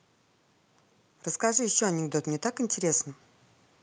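From 1.55 s to 3.1 s the speech swells in level, a case of automatic gain rising. The gain control judged the input too quiet and raised its gain gradually by about 4 dB, lifting voice and background noise together over roughly a second and a half.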